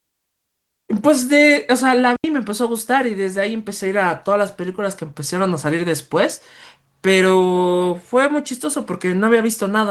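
At 2.16 s the speech drops into a clean hole of near silence lasting about 80 ms, ending at 2.24 s. This is a digital wireless dropout. The radio link lost too much data, so the receiver muted the output with a very fast fade. No crackle or noise burst comes before or after the gap. The sound simply stops and resumes. The light Opus voice compression gives the surrounding speech only mild coding texture.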